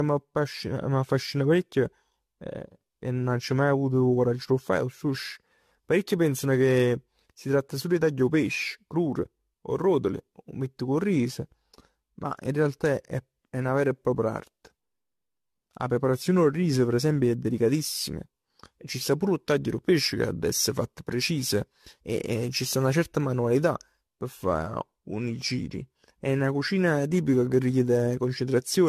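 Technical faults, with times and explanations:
Throughout, generation loss: the speech has a swirly, smeared, hollow quality, with consonant attacks blurred and nothing above 14 kHz. It sounds worse than a single encode at this quality would, which fits an AAC-LC chain at about 64 kbit/s. The likely cause is the audio being decoded and re-encoded half a dozen times or more. Each pass quantises on a shifted frame grid, so the noise and spectral holes pile up.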